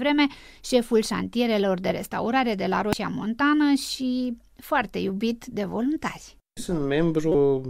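At 2.93 s, right after "de restaurare de la", the speech is broken by a very short blip caused by damaged data in a compressed stream. Corrupted bytes in the encoded frames are misread by the decoder, which then loses sync and hunts for the next valid frame header. The same fault returns from 7.31 to 7.35 s as a much longer burst, about 36 ms, before the clip ends.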